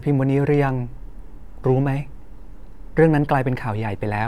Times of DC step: 0.52-4.28

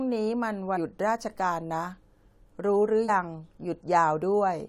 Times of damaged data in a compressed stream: 0.76, 3.08

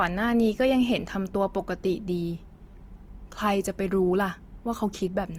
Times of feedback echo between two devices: none

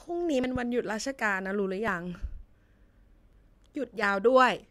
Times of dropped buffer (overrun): 0.44, 1.88, 3.33

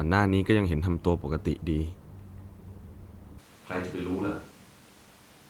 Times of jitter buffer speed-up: none

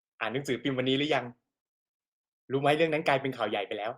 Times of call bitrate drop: 0.31-1.83

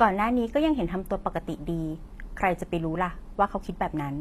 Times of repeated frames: none

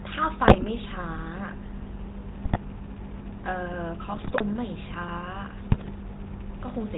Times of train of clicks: 2.29-6.90

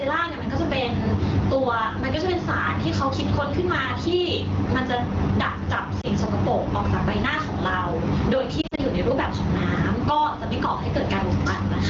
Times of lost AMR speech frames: 6.01-6.07, 8.61-8.80

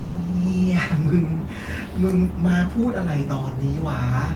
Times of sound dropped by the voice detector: 0.00-0.15

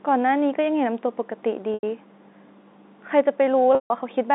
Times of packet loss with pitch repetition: 1.74-1.83, 3.75-3.90

